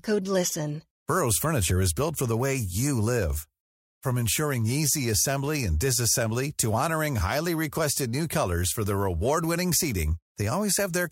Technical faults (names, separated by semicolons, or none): none